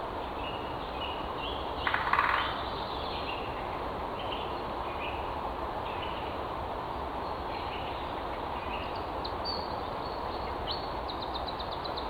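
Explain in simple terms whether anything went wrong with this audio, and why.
Three quick blips, at 1.23 to 1.25 s, 3.81 s and 9.31 s, come from damaged data in a compressed stream: corrupted bytes that the decoder stumbled over while finding its place again.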